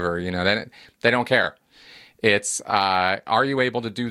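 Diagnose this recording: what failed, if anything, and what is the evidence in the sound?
Repeated frames at the codec or storage stage: brief stutters at 1.43–1.45 s, right after "know they they don't", and at 2.70–2.72 s, each one replayed 21.3 ms codec frame.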